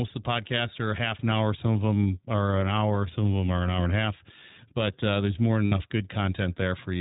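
From start to end the speech passes through the iLBC codec, a narrowband coder that handles each frame on its own. The roughness points to its 15.2 kbps mode with 20 ms frames. Nothing above 4 kHz survives, so the voice sounds dull and band-limited, with a plainly audible rough, synthetic edge.

From 5.66 to 5.74 s there are lost iLBC frames. About 60 ms is missing, which fits three consecutive 20 ms frames. The decoder fills the hole by repeating the last pitch cycle with added noise, heard as a short held, buzzy vowel. Because each frame decodes independently, the speech recovers immediately afterwards.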